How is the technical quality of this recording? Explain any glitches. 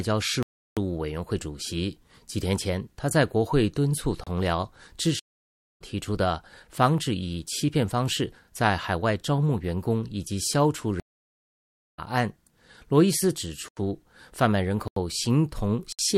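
The recording has repeated dropouts: five blocks of digital silence and two stream reconnects break up the speech.

Blocks of digital silence occur at 0.43–0.77 s (341 ms), 4.24–4.27 s (30 ms), 13.68–13.77 s (85 ms), 14.88–14.96 s (85 ms) and 15.92–15.99 s (64 ms). The output buffer likely wasn't filled in time, so zeros went out instead. The longest gap fits a 16384-sample buffer and the two 85 ms gaps fit 4096-sample buffers. Each gap is heard as a hole. On a waveform it shows as a flat line with abrupt edges. On a spectrogram it appears as a clean vertical blank.

Stream reconnects occur at 5.19–5.82 s, with 581 ms of silence, and at 11.00–11.99 s, with 951 ms of silence. Each time, the connection dropped and a fresh decoder picked up mid-stream, so the speech resumes roughly 0.4 s and 0.7 s later than where it stopped, and that material is lost. On a waveform you'd see a long flat stretch followed by speech that doesn't continue from the cut. 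On a spectrogram the harmonic patterns jump discontinuously across the gap.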